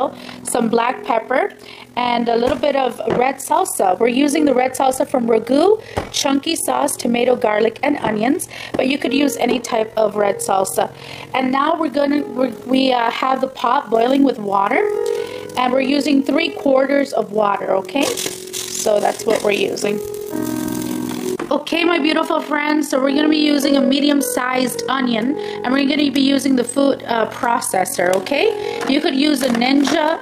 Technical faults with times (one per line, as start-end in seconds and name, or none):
0.00-30.21 overlap-add ripple